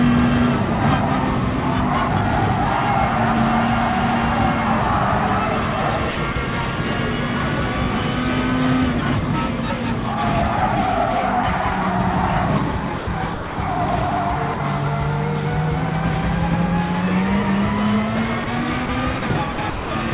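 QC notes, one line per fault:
6.11–6.35 s and 19.52–19.91 s, sound chopped by the voice detector: the sound flickers on and off, with about 90 ms and then about 270 ms swapped for comfort-noise fill. That's likely from a detector toggling its send decision.
12.98–13.07, 13.34–13.58, 14.54–14.60, 18.44–18.47, 18.86–18.89 and 19.19–19.22 s, sound dropped by the voice detector: quiet bits vanish into steady hiss for 30 to 240 ms at a time, then snap back. That's likely the sender treating them as background and stopping transmission while comfort noise fills in, all heard through a narrowband call path with nothing above 4 kHz.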